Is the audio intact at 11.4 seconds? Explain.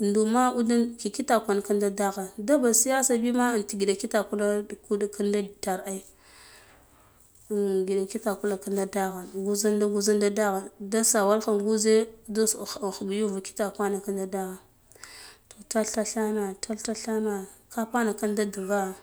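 Yes, the speech at 11.4 seconds plays through cleanly, with no dropout, click, distortion or other fault at that moment.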